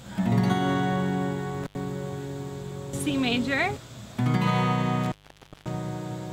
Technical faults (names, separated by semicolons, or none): intermittent contact